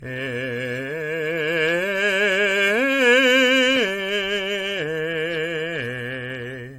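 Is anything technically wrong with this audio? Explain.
Yes. Generation loss runs throughout the music. It likely comes from roughly seven passes through an AAC-style codec at modest bitrates, each requantising on a shifted frame grid. Noise and spectral holes accumulate, nothing remains above 16.5 kHz, and attacks blur into a swirly, hollow smear.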